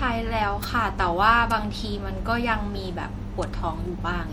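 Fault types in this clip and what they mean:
MP3 compression: The speech has a plainly audible watery, swirling quality throughout, with the treble cut off and weak detail flickering in and out from moment to moment, which likely points to MP3 encoding at a low bitrate around 64 kbps. S sounds turn chirpy and metallic, and consonant attacks smear. Unlike an isolated click, this damage is continuous and follows the signal, thinning and colouring the sound rather than adding anything separate to it.
Bit error spike: Three single sharp ticks sit on top of the speech at 0.64, 1.51 and 3.43 s, each where a stored sample value jumped by a power of two and snapped straight back. The first spans one sample, the second two and the third three. Each tick is broadband and has no relation to the speech around it. That sets it apart from codec artefacts, which track the signal, and from a dropout, which leaves a gap instead of a tick.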